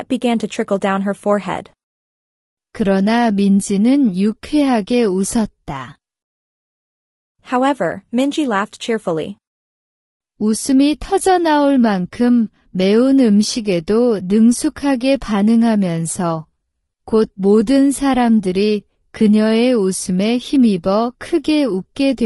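From start to finish the speech carries plainly audible low-delay AAC compression damage, likely from AAC-ELD, the video-call codec, at a rate that points to around 32 kbps. It chops the sound into short frames of roughly 500 frequency lines and spends too few bits on them, so voices come out rough and grainy.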